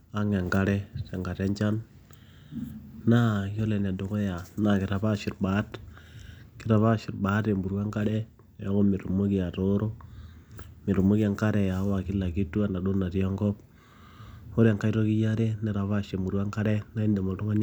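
Speech recording, no technical faults detected anywhere in the clip.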